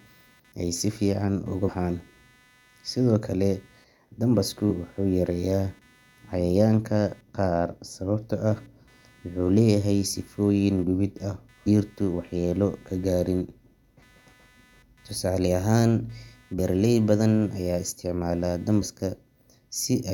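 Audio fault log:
throughout: computer activity noise. A faint buzz pulsing at around 300 Hz sits roughly 35 dB below the speech. It comes from processor or peripheral load disturbing the audio circuit's shared ground.
1.67–1.70 s (after "ay si fiican ugu"), 11.66 s, 16.58 s (before "badan ayaa"), 18.81–18.83 s: damaged data in a compressed stream. Each is a brief glitch, where the decoder misreads corrupted frames and resyncs.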